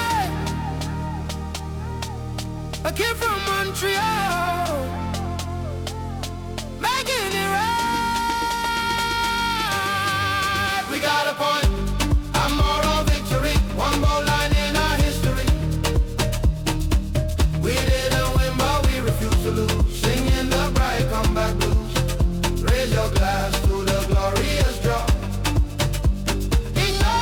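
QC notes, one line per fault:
Throughout: periodic clock jitter. The converter clock wobbles at about 1 kHz, adding sidebands beside every component, heard as a rough, metallic edge on higher content.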